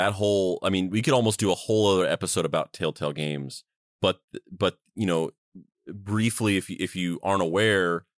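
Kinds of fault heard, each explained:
No technical faults are audible anywhere in this speech recording.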